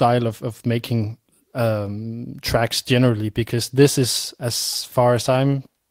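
A speech recording with nothing technically wrong with it.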